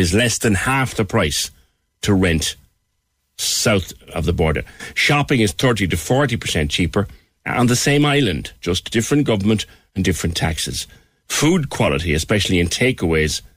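A speech clip with one bit error spike at 8.02 s, between "cheaper on the same" and "island just different government". It is a single sharp tick, reaching about -16 dBFS. It sounds like one corrupted sample. A flipped bit threw the value far off, then it snapped back.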